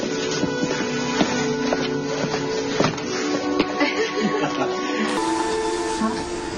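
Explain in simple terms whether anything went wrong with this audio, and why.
For the first 5.08 seconds, the adaptive stream starting at a low bitrate leaves the sound dull, with nothing above 6.9 kHz. Then quality jumps up abruptly, without any gap.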